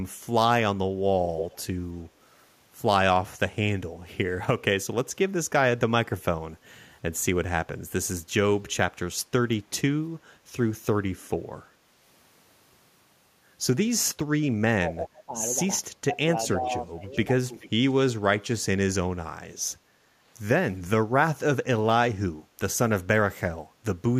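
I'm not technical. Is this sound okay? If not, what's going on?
No. There are three kinds of problem, all of the kind that happens on a speakerphone call.

Echo leak at 1.38 to 1.6 s, then 16.64 to 16.78, 17.12 to 17.18 and 17.6 to 17.93 s. You hear a delayed copy of the speech, about a third of a second late the first time and closer to half a second later on, sitting below the main speech. This is likely one side's echo canceller failing to remove its own loudspeaker sound from its microphone and sending it back.

Speech suppressed in double talk at 14.84 to 15.34, 16.13 to 16.17 and 16.6 to 17.04 s. The speech dips in level, most deeply in the first stretch. This likely happened because both sides were talking at once and the echo canceller, unable to tell the talker from the loudspeaker, turned everything down.

Background gated by the echo canceller at 19.81 to 19.92 s. The room sound drops for about a tenth of a second and then comes back. 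While the loudspeaker was playing, the canceller turned the microphone down hard and then let go.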